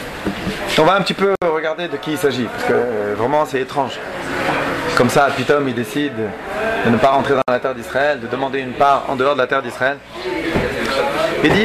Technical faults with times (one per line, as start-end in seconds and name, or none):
1.35-1.42 gap at a join of encoded pieces
7.42-7.48 gap at a join of encoded pieces